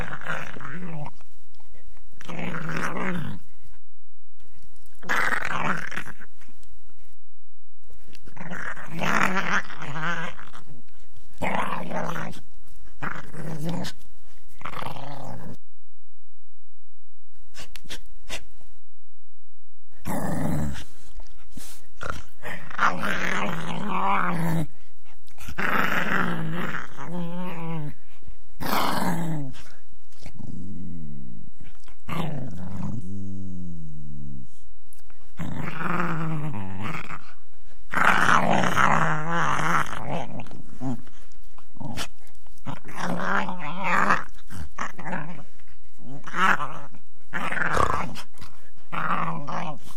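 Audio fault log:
throughout: DC offset, the sound rides about -18 dBFS off zero; inaudible itself, but it eats headroom and leaves steady energy at 0 Hz.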